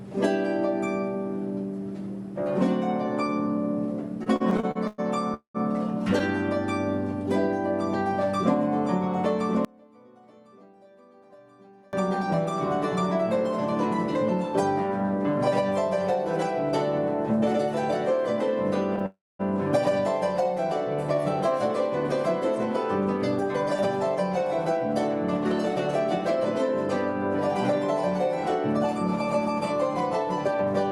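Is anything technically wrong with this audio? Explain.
Yes, there are several network and channel faults.

From 4.23 to 6.22 s there are repeated stalls (stutter): packets arrived late nine times, and the receiver stretched the last sound across gaps of up to 108 ms, so the audio drags and stutters.

At 5.34 to 5.56 s and 19.06 to 19.41 s there are call audio freezes, likely caused by held-up packets emptying the jitter buffer. Fading fills of 204 ms and 333 ms end in silences of 120 ms and 230 ms before the audio resumes.

From 9.65 to 11.93 s one channel is likely inverted in polarity. Summed to mono, the shared content cancels, and the level drops by about 27 dB to a faint remainder.

From 20.44 to 21.22 s a jitter buffer slow-down repeats pitch periods to build a reserve. This adds 60 ms and plays at 94% speed with unchanged pitch.

From 23.43 to 30.91 s a jitter buffer speed-up trims pitch periods to reduce delay. 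Roughly a tenth of a second is removed, a 101% pace.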